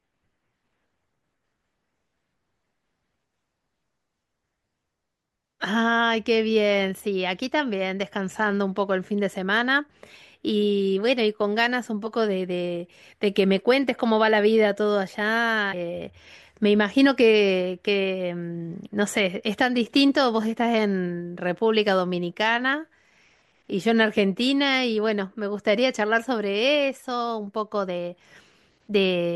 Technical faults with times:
12.05 damaged data in a compressed stream
15.72 damaged data in a compressed stream

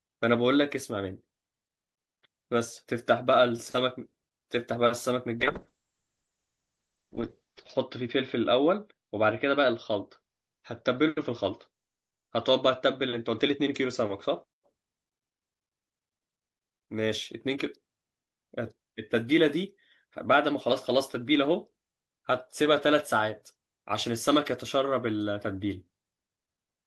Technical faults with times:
5.40-14.49 call bitrate drop

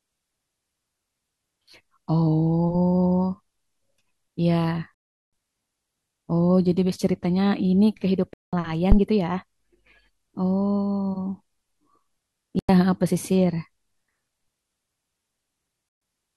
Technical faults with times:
4.94-5.30 digital broadcast dropout
8.33-8.53 digital broadcast dropout
8.92-8.98 phantom power thump
12.59-12.69 digital broadcast dropout
15.89-16.01 digital broadcast dropout

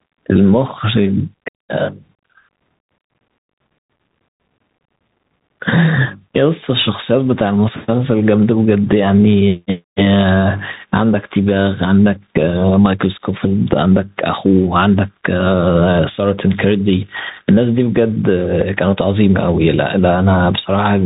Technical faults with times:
0.00-21.06 gain pumping
0.00-21.06 Bluetooth CVSD headset codec

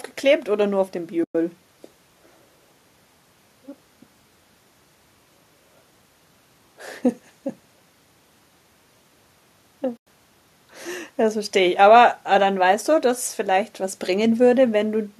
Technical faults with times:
1.24-1.35 AAC frame loss with muting
9.97-10.07 AAC frame loss with muting

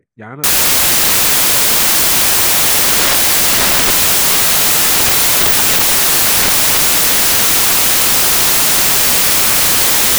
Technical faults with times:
0.44-10.18 samples built from the wrong bytes

